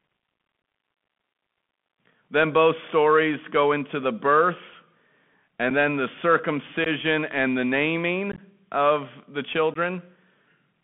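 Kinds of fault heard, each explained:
Bluetooth CVSD headset codec: muffled, narrowband speech confined to about 150 Hz–3.4 kHz, with scratchy sibilants and grainy hiss, from one-bit adaptive delta coding at 64 kbps.
Unconcealed Bluetooth headset packet loss: abrupt dropouts of 7.5 to 22.5 ms, where a few voice packets between headset and phone went missing unfilled.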